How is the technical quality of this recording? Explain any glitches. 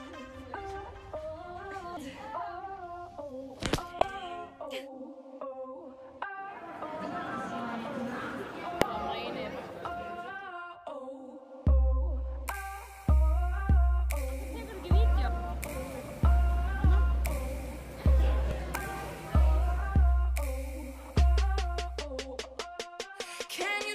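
The recording shows damaged data in a compressed stream, four brief glitches at 1.97 s, 3.98 to 4.02 s, 8.82 s and 18.51 s. At each point some of the encoded bytes are corrupt, so the decoder misreads the affected frames, loses sync and resumes at the next valid frame header. Each one is heard as a short chirp or blip in the sound. The one around 4.0 s is the longest at roughly 40 ms; the others are only a few milliseconds.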